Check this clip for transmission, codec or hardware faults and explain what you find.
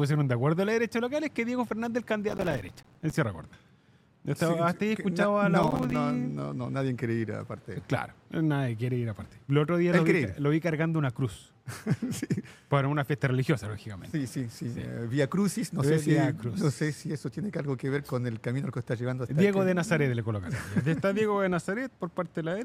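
Two bursts of processor overload crackle, at 2.29–3.16 s and 5.63–5.96 s. The processor repeatedly missed its deadlines for buffers of around 5 ms, and each missed buffer became a brief silent gap with hard edges. Together the gaps sound like gritty, tearing crackle. The waveform shows rapid dropouts, and the spectrogram shows clustered broadband vertical stripes.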